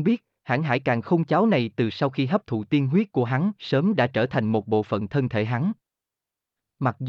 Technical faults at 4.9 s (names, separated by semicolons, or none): none